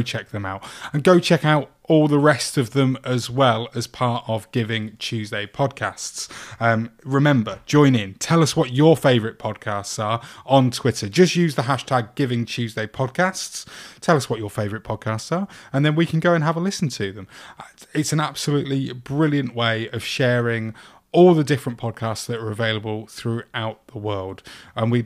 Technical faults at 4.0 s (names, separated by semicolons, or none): repeated buffer